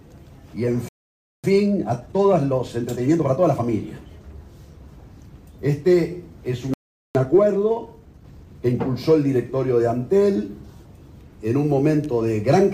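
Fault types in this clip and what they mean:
Playback stall: the sound halts in mid-flow twice, from 0.89 to 1.44 s (0.55 s) and from 6.74 to 7.15 s (0.41 s), then carries on. The likely cause is the player running short of data or its output thread being held up. Unlike a brief dropout, which lasts only tens of milliseconds and reads as a click or tick, these silences are long enough to be heard as a clear stop.
Time-compressed catch-up: directly after each stall the sound runs hurried, at 1.25 times normal speed, from 1.44 to 3.64 s and from 7.15 to 8.79 s. The player is working off its backlog by cutting out short slices and cross-fading across the joins. Pitch stays at its normal level, which separates this from a sample-rate mismatch, where pitch would rise along with speed.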